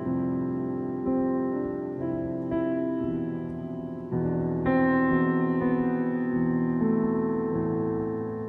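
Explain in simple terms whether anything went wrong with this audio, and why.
Nothing went wrong here: the music runs along without any glitches, dropouts or odd noises to point to, so there's no fault to explain.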